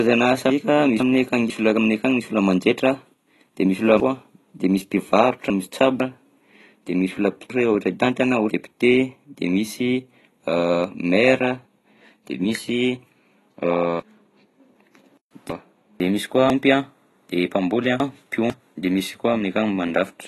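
From the start and through the whole clip, the speech sounds dull and smeared, with a fizzy, warbling edge on sibilants. The likely cause is AAC compression at a low bitrate, around 32 kbps with AAC-LC. On a spectrogram, nothing appears above 12 kHz, and the upper bands show patchy holes where the coder dropped detail it judged inaudible.

The first chunks out of order fault runs from 0.50 to 1.50 s. A half-second block of audio arrives one chunk late and plays after the block that should follow it. The same happens from 7.50 to 8.50 s. Longer jumbles, each with a block three chunks late, run from 4.00 to 6.00 s (just after "de misy"), 14.00 to 16.00 s, and 16.50 to 18.50 s. Each sounds like a garbled, jumbled moment. On a waveform these joins show as abrupt discontinuities at half-second boundaries.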